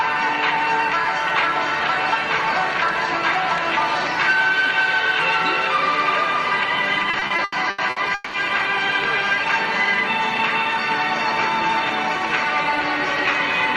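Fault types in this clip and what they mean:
Repeated stalls (stutter): between 7.03 and 8.36 s the playback halts nine times because packets arrive late or too slowly and the jitter buffer runs dry. Each stall is bridged by stretching the last sound, with the longest hold lasting about 190 ms and faded out. Together the holds add roughly 520 ms of filler, about 39% of that span. No audio is lost, but the passage drags and stutters instead of flowing.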